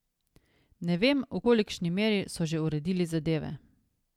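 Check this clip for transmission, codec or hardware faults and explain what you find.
One fault turns up in this speech clip, at about 1.44 s: a brief glitch lasting only around 12 ms that cuts across the sound. It is damaged data in a compressed stream. Part of the encoded data at that point is corrupt, so the decoder misreads the affected frame, loses its place in the bitstream and has to hunt for the next valid frame header. What it briefly outputs while resynchronising is this short, unnatural blip.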